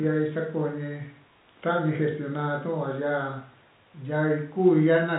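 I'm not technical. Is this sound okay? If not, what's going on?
Yes, the speech has no technical faults; it carries the muffled, narrower sound of ordinary landline telephone coding (G.711), which leaves out the highest frequencies, and that is simply how a normal phone line sounds.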